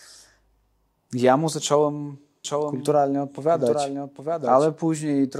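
A doubled audio track runs through this speech clip from 2.45 s to 4.67 s, likely because the same signal reached the mix a second time through a slower path or an edit left two copies out of step. A full-band copy trails the original by roughly 0.7 s at about 5 dB lower, with no decay or room colour, and it starts and stops abruptly at those times.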